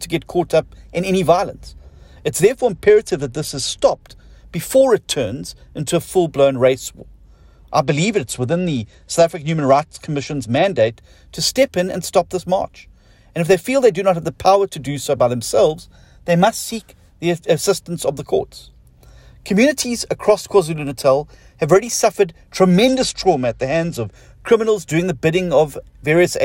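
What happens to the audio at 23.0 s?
At 23.0 s the audio is inside a Bluetooth SBC bit pool drop running from 22.88 to 24.15 s. The thinned encoding, consistent with the bit pool falling to about 12 (roughly 88 kbps), starves the upper sub-bands, so treble dulls and gritty noise appears. A spectrogram shows the top band emptying, with grainy speckle below.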